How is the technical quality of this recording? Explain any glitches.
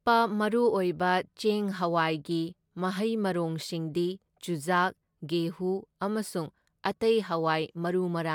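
The technical quality of the recording holds up, with no glitches to explain.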